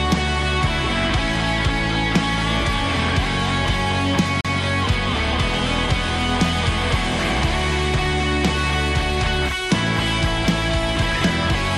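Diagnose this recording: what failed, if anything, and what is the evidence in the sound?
A brief mute of about 40 ms at 4.41 to 4.45 s, then the sound resumes elsewhere: a CD skip at playback, the laser jumping tracks.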